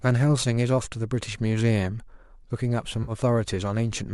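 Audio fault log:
0.85 s and 3.03–3.12 s, AAC frame loss with concealment: a 10 ms dropout, then a 50 ms one, about five frames, each filled in by the decoder from the last good spectrum, so both spots sound briefly smeared and noisy, the second clearly longer.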